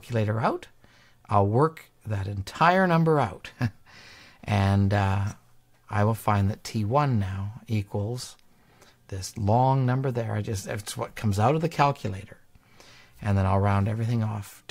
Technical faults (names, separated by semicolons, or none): none